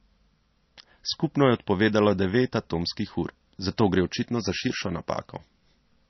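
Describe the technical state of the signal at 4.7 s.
At 4.7 s the speech carries the heavy MP3 compression damage heard across the whole clip. Nothing exists above 5.9 kHz, so the treble sounds dull, and weak frequency lines switch on and off between frames, giving a watery, swirly texture with smeared attacks. The likely cause is MP3 encoding at a very low bitrate, around 28 kbps, forcing the encoder to cut treble and drop weak lines. A spectrogram would show a flat ceiling at 5.9 kHz and flickering holes below it.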